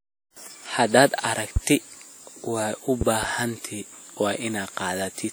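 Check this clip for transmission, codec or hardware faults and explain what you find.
Two kinds of fault show up here: codec damage across the whole speech clip, and three loud pops in two spots.

The first is WMA compression, present from start to finish and plainly audible. The speech has a ringing, washy quality, and a hiss rises and falls with it. That fits a transform codec working in long blocks, where quantisation noise smears across tens of milliseconds around each sound. The degree of damage points to a bitrate somewhere around 48 kbps. The likely culprit is a WMA encode.

The second is a loud pop, at 1.56 to 1.59 s, and again between 3.01 and 3.26 s, where two come in quick succession. Each one stands roughly 15 dB above the speech, and the speech carries on underneath. The likely cause is a sudden voltage step or pulse, from something like a plug, a switch, static or a driver glitch, which the downstream circuitry shapes into a sharp pop.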